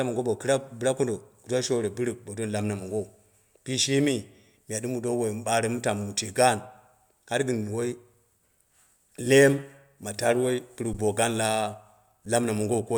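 At 10.93 s, just before "bo gaani", and again at 12.26 s, an underrun with held sample briefly freezes the waveform at its last value, for about 11 ms and 5 ms, which fits 512- and 256-sample buffers. Unlike a dropout to silence, it stops without a click and resumes softly.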